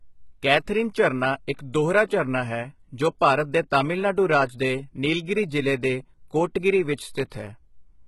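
From start to finish the speech has a bright but artificial top end: s sounds come out gritty and lispy, with a metallic sheen, and nothing at all is present above 11.8 kHz. The damage is heavy. This is likely HE-AAC compression at a very low rate, consistent with roughly 16 kbps, where only the lower spectrum is truly coded and the treble is rebuilt by copying lower bands upward, so its harmonics fail to line up with the real ones.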